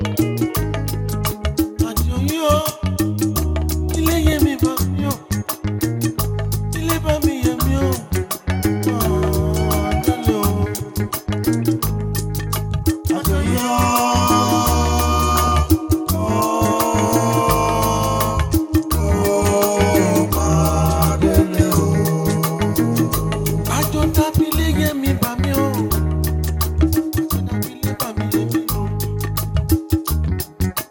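DAB burbling appears from 3.95 to 4.33 s, 11.09 to 11.27 s and 15.36 to 15.50 s. Weak reception lets bit errors, around 0.1 to 0.15 percent, slip past error correction. Wrong samples put short blips of noise in single sub-bands. The audio burbles.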